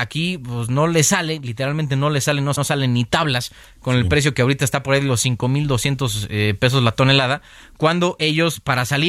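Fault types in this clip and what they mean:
Repeated frames: a short stutter at 2.55 s, where the 0.1 s of speech up to 2.65 s plays twice back to back. A block of compressed frames, fitting a run of four, was written or sent twice and decoded both times, adding 0.1 s.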